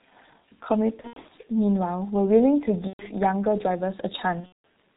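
The whole clip runs through a G.723.1 codec, and it's heavily damaged: everything above 4 kHz is gone, so the speech comes out muffled and hoarse with smeared consonants. That fits a 6.3 kbit/s stream whose slow-updating voice model can't keep up. Then there's VoIP packet loss concealed by the speech codec, three times. Between 1.01 and 1.35 s about 210 ms of audio is missing, scattered over 300 ms with the longest gap 90 ms. From 2.87 to 3.06 s 120 ms drops. From 4.40 to 4.65 s 210 ms goes, mostly in one 180 ms run. Each time the decoder keeps extending its last pitch and filter, so the speech turns into a fading buzzy tone or coloured noise, and it stays weak for a moment after the packets come back.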